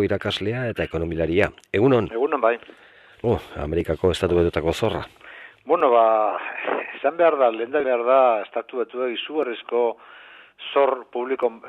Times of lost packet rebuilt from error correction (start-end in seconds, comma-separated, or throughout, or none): none